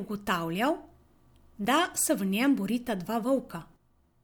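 Speech clip with one repeated buffer at 1.64 s, just before "da se". A tiny slice plays twice, causing a brief click. This fits a 10 ms buffer, and about that much new audio is lost.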